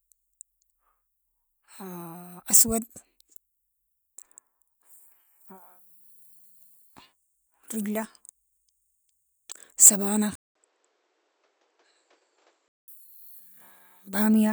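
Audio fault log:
10.35–12.88 s, input switched to a poorer device: the input likely jumped to another microphone or a headset call profile. After a 200 ms gap, the speech loses everything above 8 kHz, sounds dull and boxy, drops around 10 dB, and carries new noise roughly 35 dB down.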